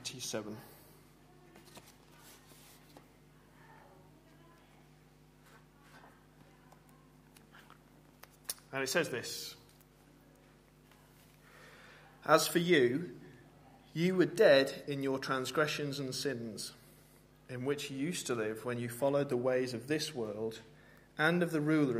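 No dropouts, clicks, distortion or timing faults can be heard at any point in the audio.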